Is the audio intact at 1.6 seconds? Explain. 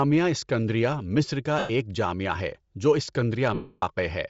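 No. From 1.59 to 1.70 s, about 105 ms, the speech breaks up into a sound that weakens as it goes. These are lost LE Audio frames. The decoder keeps replaying the last spectrum with randomised signs and fades it, which fits a run of lost 7.5 ms frames. Around this point the speech also carries a plainly audible breathy, grainy edge, likely from Bluetooth LC3 compression at a low bitrate near 32 kbps, which zeroes much of the upper spectrum and fills it with noise.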